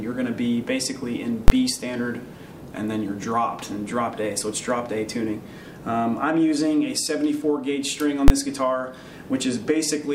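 Two loud bangs cut through the audio at 1.48 to 1.50 s and 8.28 to 8.30 s, each caused by invalid numbers at full scale. A calculation produced infinite or invalid values that pinned the output at one extreme value for a 20 ms block, heard as a single sharp bang.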